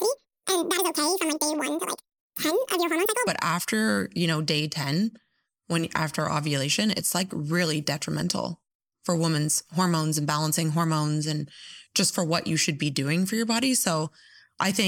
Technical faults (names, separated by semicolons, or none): audio read two samples at a time (double speed)